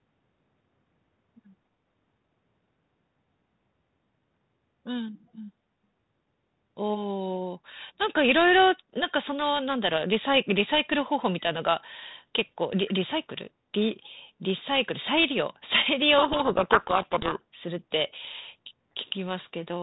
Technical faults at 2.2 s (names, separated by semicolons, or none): none